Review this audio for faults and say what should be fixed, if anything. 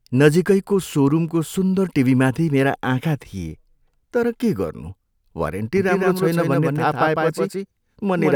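From 5.77 s to the end of the speech, a doubled audio track is present: a second full-band copy trails the original by roughly 150 ms at about 5 dB lower. The copy cuts in abruptly and carries no decay or room colouring, so it reads as a discrete echo rather than reverberation. The likely cause is the same signal reaching the mix twice, once directly and once through a slower capture or monitoring path. Route each source through a single path and mute any loopback or duplicate input before recording.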